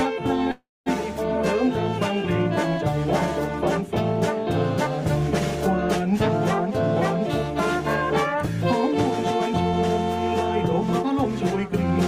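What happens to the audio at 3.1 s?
Nothing goes wrong at 3.1 s; the audio plays through that moment intact, with no dropout, click or other fault.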